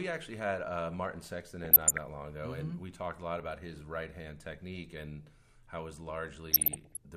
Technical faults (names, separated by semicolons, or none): DAB burbling